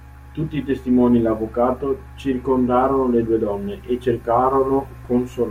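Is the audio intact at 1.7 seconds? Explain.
Yes, the speech at 1.7 seconds is intact, with no audible fault at that moment.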